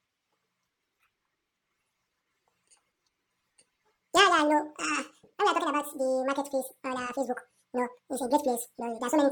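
From start to finish, the speech plays at double speed and an octave higher. This is audio read two samples at a time. Each pair was taken as one frame.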